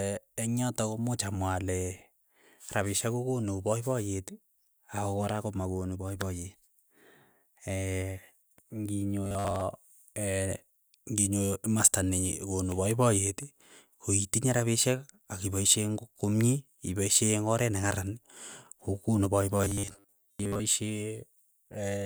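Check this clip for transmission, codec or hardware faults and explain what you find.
Two stretches of robotic sound from repeated short buffers turn up in this speech, at 9.25 to 9.61 s and again at 19.58 to 20.61 s. The voice goes stiff and metallic, locked to a buzz at 100 Hz. That's likely audio arriving too slowly, so the playback side keeps looping a 10 ms slice instead of real signal. It's roughly half the time in the first stretch and most of the second.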